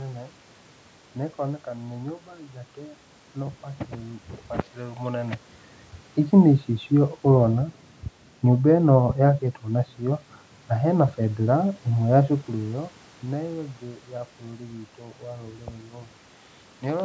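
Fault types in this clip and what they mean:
No technical faults are present.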